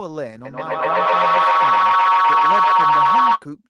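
A speech recording in which a microphone-to-loudspeaker loop gained level on every pass, producing a feedback howl from 0.45 to 3.46 s: a tone near 1 kHz, with the loop repeating roughly every 150 ms and peaking about 14 dB above the speech.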